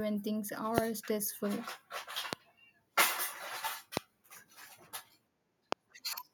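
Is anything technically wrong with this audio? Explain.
Yes. There is a loud pop at 0.78, 2.33, 3.97 and 5.72 seconds. Each is a single sharp thump over the speech, far above its level. A likely cause is a brief voltage pulse from a plug, switch or static.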